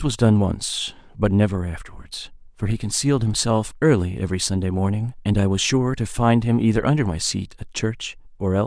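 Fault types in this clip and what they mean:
No faults are present: the speech signal holds steady throughout, with no dropouts, distortion, noise bursts, timing irregularities or level jumps.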